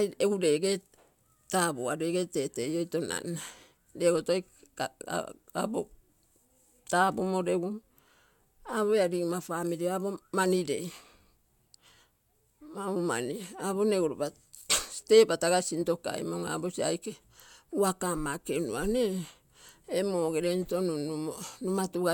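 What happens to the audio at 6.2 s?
Nothing goes wrong at 6.2 s; the speech carries on there without any audible fault.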